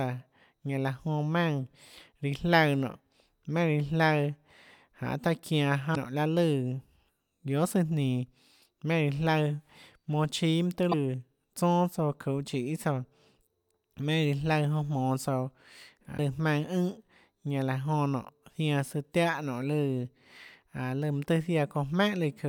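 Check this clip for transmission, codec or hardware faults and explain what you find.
There's one problem here, and it shows up three times: damaged data in the compressed stream, at 5.92 to 5.97 s, 10.91 to 10.94 s and 16.14 to 16.19 s. Each hit is a short blip, roughly 30 to 50 ms. Some bytes in the encoded speech got lost or corrupted, so the decoder can't make sense of those frames. It drops sync and hunts for the next valid frame header, which leaves a brief glitch.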